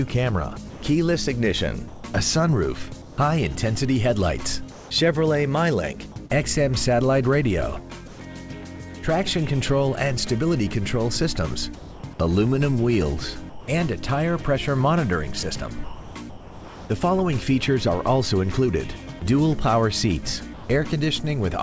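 Comfort noise in place of the background occurs at 0.70 to 3.18 s, 4.72 to 4.90 s and 8.08 to 8.20 s. Discontinuous transmission likely stopped sending, so a flat synthetic hiss stands in for the real background, about 3 dB and 2 dB quieter in the later two.

Short concealed packet loss occurs at 6.26 to 6.32 s. About 40 ms never arrived, and the decoder stretched the preceding sound over the gap, leaving a brief smear.

Sound dropped by the voice detector occurs at 11.76 to 12.04 s, 13.50 to 13.68 s and 20.54 to 20.70 s. Each time the detector likely judged quiet sound to be background, and roughly a tenth of a second or more gives way to steady noise.

Sound chopped by the voice detector occurs between 15.84 and 16.90 s. Transmission likely switched on and off repeatedly, so the sound breaks up. Throughout, the G.722 call path leaves nothing above 8 kHz.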